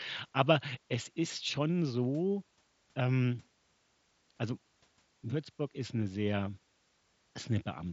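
Nothing stood out on listening to this speech, which arrives over a Bluetooth mSBC headset link, with nothing above about 7.7 kHz.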